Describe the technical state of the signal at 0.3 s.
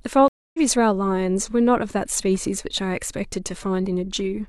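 The speech drops out at 0.3 s: from 0.28 to 0.58 s there is about 0.26 s of silence, then it resumes roughly a fifth of a second further on. This is a stream reconnect, where the broken connection was re-established and a fresh decoder started mid-stream.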